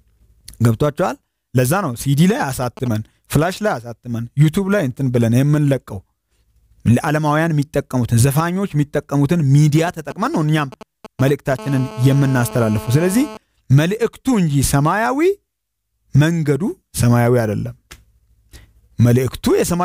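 Two short stretches of GSM signalling bursts, at 2.30 to 2.88 s and 9.78 to 11.54 s, sit roughly 15 dB below the sound as a galloping dit-dit-dit of brief 217 Hz buzzes, from a nearby 2G phone's intermittent radio pulses rectified by the audio circuit. Straight after, from 11.59 to 13.37 s, this becomes GSM phone buzz: a continuous, raspy, harmonic-rich 217 Hz tone about 16 dB below the sound. Unlike the broken bursts, it stays steady, which marks a phone transmitting constantly during a call.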